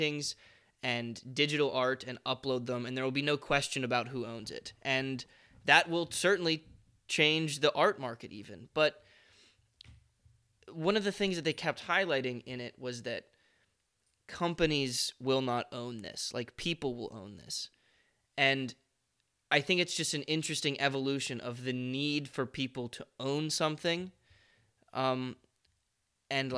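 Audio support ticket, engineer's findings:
No audible faults found in the speech recording.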